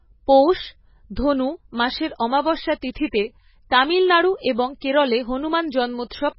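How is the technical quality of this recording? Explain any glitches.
The recording has heavy codec damage throughout and one brief pre-echo.

MP3 compression runs through the whole clip. Nothing is heard above 5.6 kHz, and the speech sounds watery and swirly as weak frequency lines drop in and out between frames. This likely comes from an encoder starved of bits, which fits a very low bitrate near 16 kbps.

Pre-echo occurs at 2.18 s, right after "ধনু মাসের". A sharp onset late in a transform block lets quantisation noise spread backward about 19 ms into the quiet before it, so a short hiss precedes the attack and the attack itself sounds smeared.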